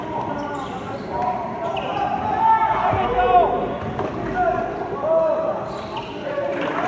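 No faults are audible anywhere in this recording.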